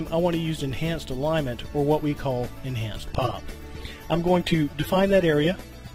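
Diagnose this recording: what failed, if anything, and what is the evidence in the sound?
Network-driven codec switch: an adaptive stream at a lower bitrate. At 3.09 s, with no gap, codec artefacts abruptly rise until the end. The connection likely slowed, so the player switched to a lower-bitrate AAC rendition, consistent with roughly 96 dropping to 32 kbit/s.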